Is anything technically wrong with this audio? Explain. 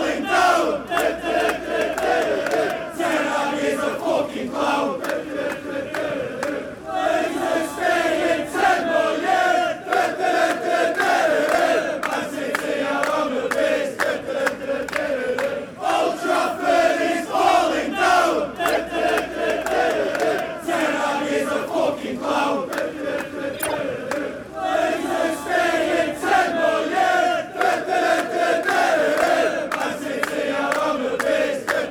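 Yes. There are two corrupt frame decoded faults. The first runs from 18.71 to 18.78 s. The second runs from 23.54 to 23.74 s and covers more frames. In each case the decoder played damaged compressed frames as if they were valid. Misread gains and codes put energy in the wrong frequency bands. Each fault is heard as a sharp chirp or burst of noise lasting as long as the damaged frames, peaking around -10 dBFS.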